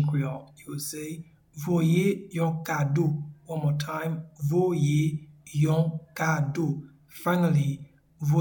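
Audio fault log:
No faults detected in the audio.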